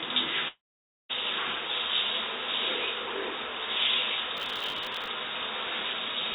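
From 0.48 to 1.11 s there is a long network dropout, most likely from audio packets never arriving. The receiver stretches the last sound into a fading buzz. Silence follows. About 0.6 s of sound is lost, and the audio resumes past the gap.

From 4.37 to 5.08 s comes processor overload crackle. The processor keeps missing its deadlines for small buffers of about 5 ms, around fifty of them. Each miss replays a scrap of old audio with hard edges. Together they make a gritty tearing over the sound. The call codec's 4 kHz ceiling dulls the top end throughout.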